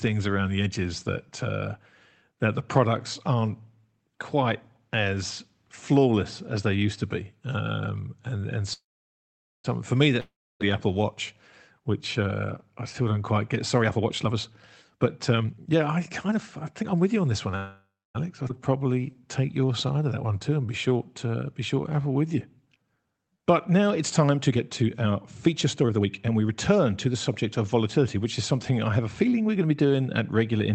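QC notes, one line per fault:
8.73–9.66 s, call audio freeze: packets were likely held up and the jitter buffer ran dry, so the receiver stretched the last sound into a fading buzz, then about 0.83 s of silence. Audio resumes where it stopped, pushed back by about 0.91 s, with nothing lost.
10.20–10.62 s, long network dropout: a run of audio likely never arrived, so a brief fading continuation gives way to about 0.29 s of silence. Playback then picks up further on, with roughly 0.4 s of speech gone for good rather than delayed.
13.80–17.54 s, jitter buffer speed-up: the buffer had built up excess delay, so the receiver trimmed short pitch-period pieces over and over, removing about 0.7 s in all. Speech runs at 119% speed with unchanged pitch and sounds hurried.
17.56–18.16 s, call audio freeze: likely another stall that emptied the jitter buffer; the last sound is held as a fading buzz, then about 0.27 s of silence, and speech continues from the same point about 0.58 s later, nothing missing.
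18.48 s, skip ahead: roughly half a second of audio was dropped while later packets were already queued, so playback jumps forward with an almost seamless join and that stretch of speech is simply absent.
18.70–23.70 s, jitter buffer slow-down: with its reserve running low or its target delay raised, the buffer repeated single pitch periods and bits of pauses many times, adding about 0.47 s. Speech plays at 91% speed at normal pitch, drawn out.
24.37–29.92 s, jitter buffer speed-up: excess buffered delay was again cut by removing small pitch-period slices, about 0.7 s overall. Speech runs at 114% speed without any pitch change, so it sounds rushed across this whole stretch.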